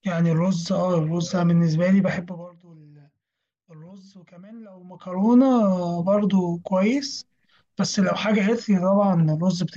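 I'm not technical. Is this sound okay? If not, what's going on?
Yes, there are no faults.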